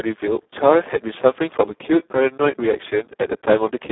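From start to finish the speech carries heavy Speex codec damage. At this level the CELP coder has almost no bits left for the excitation, so voices come out hoarse, buzzy and close to robotic, which fits a very low setting around 4 kbps. The band is squeezed into a telephone-like 250 Hz to 3.5 kHz, with nothing at all above 3.8 kHz, so it sounds muffled and thin on top of the grit.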